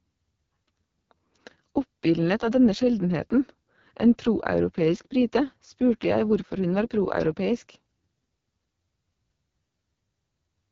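From start to finish the speech passes through the AMR wideband (HD Voice) codec under heavy strain. It sounds rough and raspy, the sound of the lowest coding mode, near 6.6 kbit/s. Unlike a narrowband phone codec, the band stays open to about 7.4 kHz, though the top is only shaped noise.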